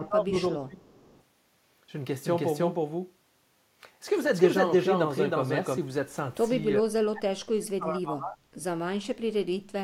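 Speech recording with two echo-canceller faults. In what is likely speech suppressed in double talk, the canceller mistook the talker for loudspeaker echo and turned the voice down by up to roughly 15 to 35 dB, at 0.0–0.35, 0.56–0.84, 6.79–6.9 and 7.12–8.39 s, so it dips and drops out in pieces. From 0.86 to 1.23 s, a likely echo leak sends back a very faint copy of the voice, delayed by 398 ms, that the canceller failed to remove.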